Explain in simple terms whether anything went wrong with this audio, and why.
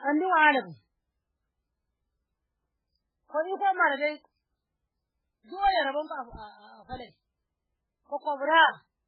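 Heavy MP3 compression, likely the cause, affects the speech from start to finish: nothing is left above 5 kHz, so it sounds muffled. Unlike a simple treble cut, the remaining sound also turns watery and swirly, because faint details flicker in and out.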